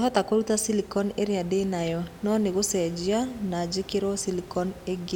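No technical faults occur at any point in this speech, with only a low room noise sitting about 20 dB below the voice.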